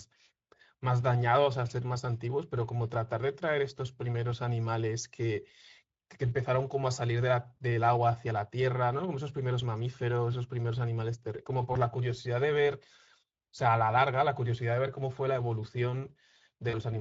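Speex codec damage runs through the whole of this speech recording and is plainly audible. The codec models the voice with a small set of filter and pitch parameters and spends few bits on the excitation that drives them, so the voice comes out hoarse, grainy and slightly synthetic, with a noise-like fill in place of real detail in the upper band. The degree of coarseness fits a Speex setting of around 16.8 kbps. VoIP packet loss concealed by the speech codec occurs at 11.73–11.77 s and again at 16.69–16.79 s. In each gap the decoder has no new data, so it keeps extrapolating from its last pitch and filter state while turning the gain down. The result is a short buzzy or tonal smear that fades instead of going silent. The first gap fits a single lost 20 ms frame. The second covers about 40 ms, which points to two. Because each decoded frame builds on the previous one, the voice stays thin and distorted briefly after the packets resume.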